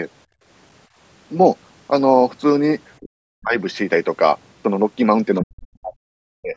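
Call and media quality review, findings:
Background gated by the echo canceller, 0.26–0.44 s: room tone drops by about 25 dB for roughly 200 ms while the far end plays, then recovers when the canceller releases.

Speech suppressed in double talk, 2.98–3.55 s and 5.43–6.56 s: near-end speech sinks deeply, around 40 dB, likely from the canceller attenuating both talkers during overlap.

Other side's voice leaking through, 5.35–5.44 s: brief far-end fragment well below the talker, likely residual loudspeaker echo the canceller missed, just before the second suppression.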